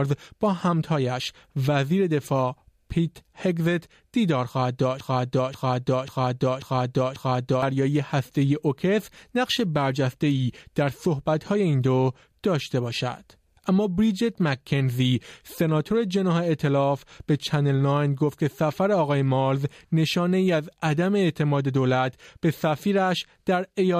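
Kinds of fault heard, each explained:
Broken-record loop: from 5.00 to 7.62 s, a 0.54 s fragment of the sound plays five times in a row, each repeat identical and joined straight onto the last, before the audio moves on. This is likely a stall in the player, encoder or stream, which kept sending the last piece it held instead of fresh material. Whatever should have played during those 2.6 seconds never arrives, so the sound after the loop resumes from a later point.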